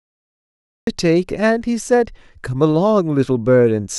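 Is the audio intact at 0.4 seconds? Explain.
No. At 0.4 seconds the clip is in digital silence: a cut-off start runs from 0.0 to 0.87 s, where capture began late and the speech enters abruptly mid-sound, with no natural onset. Unlike a dropout, no audio precedes the silence.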